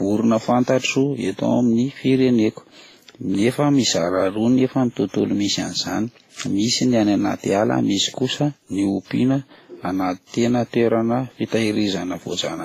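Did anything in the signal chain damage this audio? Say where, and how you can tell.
Yes, at the codec stage: transcoding between lossy codecs, present throughout the speech. Nothing sounds above about 15.1 kHz, and two distinct layers of coding artefacts sit together, which points to a low-rate WMA encode near 24 kbit/s later re-encoded as Vorbis near 45 kbit/s, likely during a format conversion. The second encoder spent its bits reproducing the first one's artefacts and added its own, while the lower bandwidth limit carried through.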